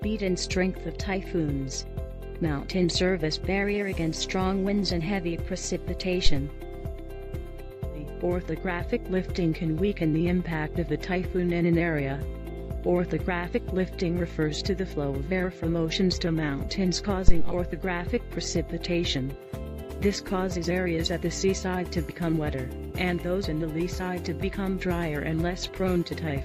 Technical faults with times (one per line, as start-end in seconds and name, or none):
6.26-6.36 phantom power thump
17.28-17.61 phantom power thump